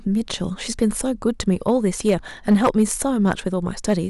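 Short crackle on speech peaks at 0.82 s and 1.40 to 1.71 s, then sustained harsh fuzz from 2.08 to 3.32 s, then crackle again at 3.89 to 3.94 s, is hard clipping. Overdriven by about 1, 2, 6 and 4 dB, the peaks are cut flat, adding high harmonics.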